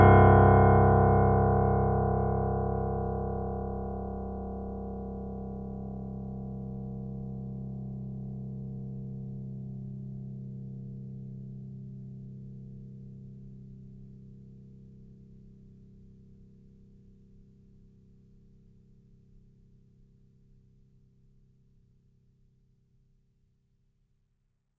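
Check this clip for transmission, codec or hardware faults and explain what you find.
Nothing wrong turned up in this music clip; no transmission, codec or hardware problem is audible anywhere in it.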